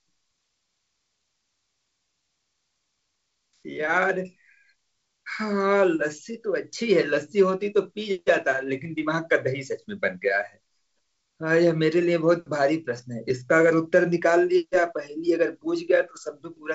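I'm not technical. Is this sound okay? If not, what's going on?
Yes, nothing in this speech recording points to a fault. It has gone through G.722 wideband telephone coding, which leaves nothing above about 7.7 kHz and only a light trace of its own, as that coding normally does.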